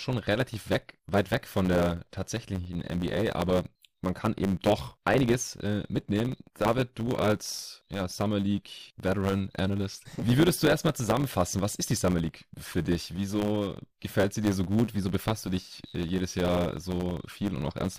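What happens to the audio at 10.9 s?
A block size mismatch (truncated) runs through the whole clip, including 10.9 s. The tail of each written block, which fits a 512-sample size, is dropped by the reading stage. The speech carries a 100 Hz buzz and plays 1.07 times fast at roughly normal pitch.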